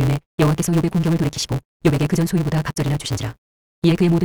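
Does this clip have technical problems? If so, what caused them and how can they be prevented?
Yes. Throughout the speech there is a block size mismatch (truncated). One stage writes longer blocks than the next stage reads, which fits a 256-sample read, so the end of every block is dropped. This causes a 172 Hz buzz, and the speech runs 1.88 times fast with its timbre intact. It is prevented by making both stages use the same block size, or by buffering leftover samples instead of discarding them.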